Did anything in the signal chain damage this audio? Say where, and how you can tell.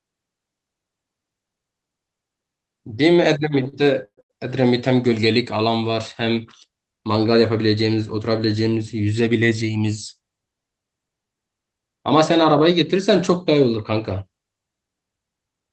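Yes. The damage happened at the network and jitter-buffer stage of a call path. The speech came through an Opus-style codec, and its top end stops at about 8 kHz.

Between 3.63 and 4.32 s you get repeated stalls (stutter). The buffer ran dry four times as packets turned up late, and each time the receiver stretched the last bit of sound to cover the hole. That's 262 ms of filler, about 38% of that stretch, with the longest wait at 127 ms. Nothing actually drops out, but the speech drags and hiccups there.

The opposite problem shows up twice as jitter buffer speed-up. From 9.06 to 9.77 s, playback runs at about 112% as the buffer sheds roughly a tenth of a second of backlog. From 15.32 to 15.70 s it runs at about 113%, trimming around 50 ms. The receiver was snipping out tiny pitch-period chunks back to back. Pitch stays put, but those bits sound rushed.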